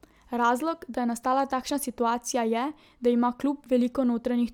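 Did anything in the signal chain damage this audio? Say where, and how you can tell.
No, nothing in this signal chain damaged the audio.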